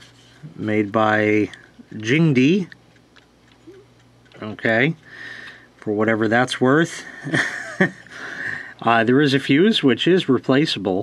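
Nothing in this audio stood out as a technical problem on listening.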